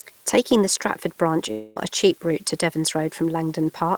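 Right from the start there's a steady crackle, a fine fizz sitting under the speech and carrying on through the pauses. That's an unreliable data bit: one marginal data line flips its bit in a random share of samples, and each flip lands as an identical spike.

At 1.51 s the speech stops short. For about a quarter of a second, up to 1.79 s, the last sound is stretched into a fading buzz rather than falling silent. It then picks up at "a cheap route to" with that stretch gone, which is likely a long network dropout.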